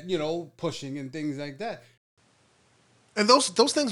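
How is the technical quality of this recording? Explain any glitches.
There's one noticeable glitch. After "and things like that", at 1.98 s, a 200 ms gap leads to a duller, band-limited sound (nothing above 11.4 kHz) with faint new hiss. The input likely switched to a poorer device.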